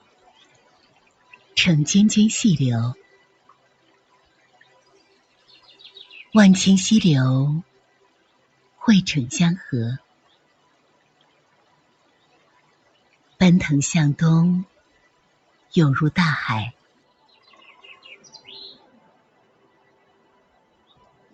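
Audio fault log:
Throughout: a noise suppressor applied to music or sounds. The suppressor, tuned for speech, treats sustained tones, ambience and reverb as noise and pulls them down, with a gain swing of around 20 dB. Attacks pass, but held material and tails sink, so the sound pumps and thins. On a waveform the envelope shows sharp onsets followed by sagging bodies. On a spectrogram, sustained partials and reverb tails fade early and unevenly. The band is capped near 8 kHz by the call's microphone processing.
3.29–3.47 s, 3.63–4.11 s, 7.93–8.77 s, 10.11–12.26 s, 15.1–15.59 s, 19.2–20.88 s: sound cut by the noise suppressor. In each stretch the suppressor judged the ongoing sound to be noise and turned it down harder than the surrounding audio, by about 4 dB in the first four and about 5 dB in the last two. Steady and decaying parts drop in level or have their decays clipped short, while sudden events hold up. 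The longest cut, near 10–12 s, lasts about 2 seconds. The waveform shows a shallow dip in the envelope. The spectrogram shows sustained energy dimming across the band.
4.82–7.09 s, 16.03–17.51 s: Bluetooth SBC bit pool drop. Link congestion forced the encoder to spend far fewer bits per frame. The sound fits a bit pool falling from 31 to about 13, near 94 kbps. The highest sub-bands are starved or emptied and the rest are coarsely quantised, so the treble dulls and gritty noise rises until the rate recovers. On a spectrogram the upper region goes patchy or blank in blocky strips, with a grainy noise floor filling between components.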